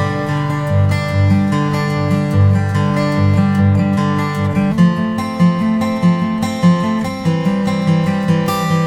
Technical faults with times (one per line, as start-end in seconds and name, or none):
0.00-3.40 mains buzz